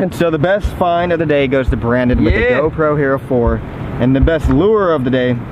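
No technical faults can be heard anywhere in this audio. Nothing in the recording, transmission or playback chain stands out as having gone wrong at any point.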